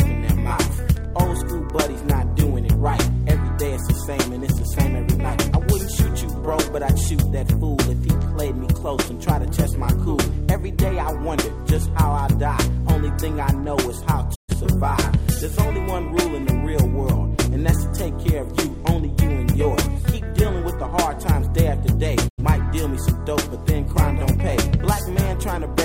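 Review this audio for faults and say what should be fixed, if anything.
Digital broadcast dropouts occur twice: the receiver lost sync or rejected corrupted frames and muted until clean frames returned. The sound fades out over about 20 ms and goes silent from 14.34 to 14.54 s, which fits three missing frames, and again from 22.27 to 22.43 s, which fits two. The audio sent during those gaps is gone. Improving reception margin with better antenna placement, a stronger signal, or more robust error protection would prevent these mutes.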